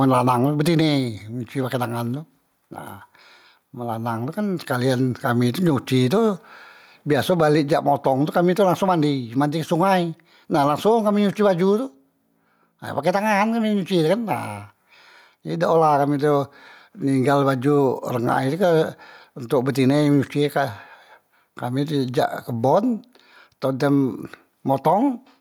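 Gain pumping runs through the whole speech clip. The swing is around 10 dB. Loud and quiet passages sit close together in level, and the sound feels squashed. The likely cause is input gain set far too high, with a fast limiter or compressor pulling the level down on each peak.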